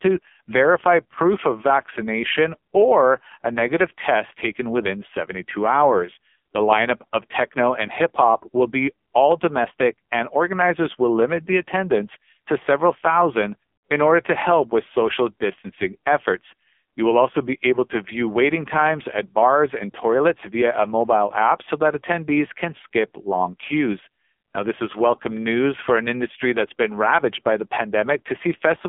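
Throughout the speech, the sound carries AMR narrowband mobile codec damage, and it is heavy. Nothing reaches above 3.6 kHz, and the usable band sits between roughly 200 Hz and 3.5 kHz. What separates this from a plain telephone-style filter is the buzzy, synthetic texture: the voice is rebuilt from a vocal tract model and a sparse pulse excitation, and at this level of damage the sound points to a low mode near 5.9 kbps.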